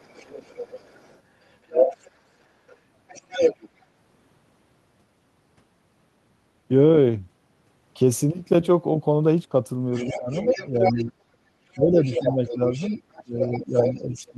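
A second, fainter voice runs under the talker from 0.00 to 2.11 s, well below the main speech. It flickers again at 2.67 to 2.77 s, then rises to roughly equal loudness from 3.08 to 3.82 s and sits only slightly below it from 9.92 to 11.04 s. This is the other side's voice leaking through, likely because the loudspeaker's output reached the microphone and the echo canceller left a residue.

While that second voice plays, the talker dips by about 15 dB at 10.02 to 10.36 s and 10.70 to 11.15 s. From 11.65 s to the end at 14.37 s the talker drops by up to about 20 dB, while the other voice, nearly as loud, returns from 11.95 s. This is speech suppressed in double talk, likely because the canceller could not separate the talker from the echo and turned both down.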